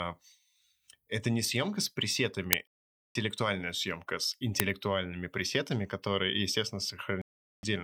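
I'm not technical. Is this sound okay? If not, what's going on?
No. There are two uninitialised buffer glitches, at 2.53 s and 4.60 s (just after "съемка с"): tiny, harsh clicks of digital noise where the player output a scrap of leftover memory instead of the speech. There are also two digital broadcast dropouts, from 2.68 to 3.16 s (just before "съемка с") and from 7.22 to 7.64 s (after "пресетами которые естественно"). In each, the sound goes silent for about half a second because the receiver lost the signal or received corrupted frames, and that part of the speech is missing.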